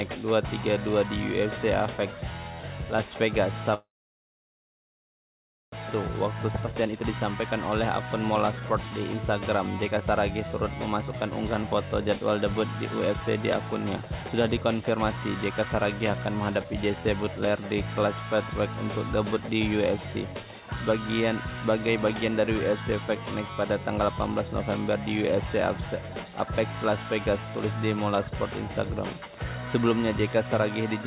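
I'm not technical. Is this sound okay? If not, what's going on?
No. There are three kinds of problem, all typical of audio sent over an internet call.

Call audio freeze, 3.74 to 5.74 s: the sound stops for about two seconds, almost all of it silence. The likely cause is that the data carrying the audio was held up on its way, so the receiving side ran out of audio to play. When the data arrived, playback picked up where it had stopped, so nothing is lost but a pause was added.

Jitter buffer speed-up, five times: 5.90 to 7.48 s (about 9% faster), 8.32 to 9.18 s (13%), 9.88 to 10.13 s (31%), 10.90 to 13.22 s (8%) and 14.01 to 17.04 s (13%). After the hold-up, the receiver had more audio waiting than it wanted. To catch up, it cut out many tiny slices, so the sound runs faster and feels hurried while the pitch stays the same.

Skip ahead, at about 6.66 s: roughly one second of sound is simply missing. 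Playback jumps straight from before the cut to after it, with almost no gap, so the two sides are joined almost directly even though part of the audio is gone.

Separately, the whole clip has the narrow, phone-like quality of this kind of call, with nothing above 4 kHz.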